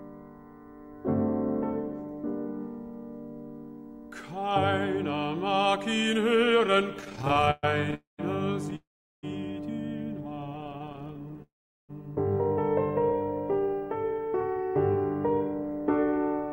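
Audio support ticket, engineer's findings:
Repeated stalls (stutter), 7.01–7.94 s (15 gaps, longest 122 ms) and 10.30–11.40 s (31 gaps, each 21 ms or less). Jitter buffer underruns, last sound extended, nothing lost.

Call audio freeze, 7.94–8.21 s, 8.76–9.25 s, 11.42–11.91 s (about 240, 470, 460 ms). Fill fades into silence, then audio resumes. Likely delayed packets emptying the jitter buffer.

Jitter buffer speed-up, 13.11–14.71 s (109%) and 15.63–16.48 s (116%). Hurried playback at unchanged pitch. Receiver trimming pitch periods, roughly 150 ms each span, to shrink excess buffer delay.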